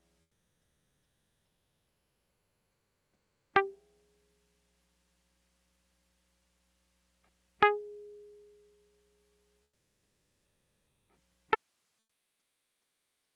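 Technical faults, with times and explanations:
0.21–3.53 s and 9.63–11.09 s, comfort noise in place of the background: in these quiet stretches the real background, about 54 dB below the loudest music, becomes steady, featureless noise about 4 dB and then about 2 dB quieter. This is likely Opus discontinuous transmission with receiver-generated fill. A spectrogram shows smooth, uniform texture without the original's detail.
11.55 s to the end, audio dropout to a faint residue: the music cuts off abruptly rather than fading, leaving only hiss roughly 40 dB below the signal. The likely cause is a lost feed with the path after the break still live. The waveform collapses to a thin flat band, and the spectrogram thins to faint broadband speckle.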